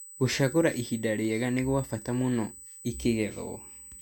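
A USB whine sits under the speech from start to finish. It is a steady, fixed tone at 8 kHz, roughly 20 dB below the speech. The bus draws current every 125-microsecond microframe, and that pulsing leaks in through the power or ground.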